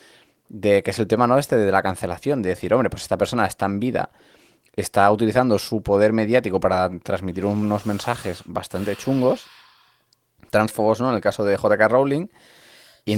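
No technical faults can be heard.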